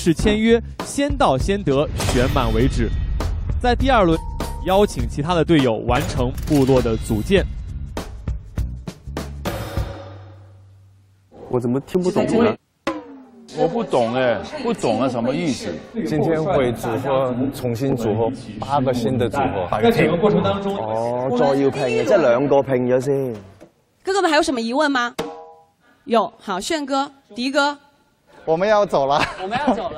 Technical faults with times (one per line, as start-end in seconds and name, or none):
5.97 audio missing between chunks
11.95 audio missing between chunks
17.92 audio missing between chunks